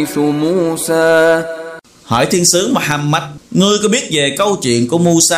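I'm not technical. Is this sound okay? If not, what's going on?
No. Throughout the clip there is hard clipping: the loudest moments are slightly too big for the recording to hold, so their tops get sliced flat. Only a tiny fraction of the sound is affected, so you hear brief crackles on peaks rather than steady hiss or fuzz.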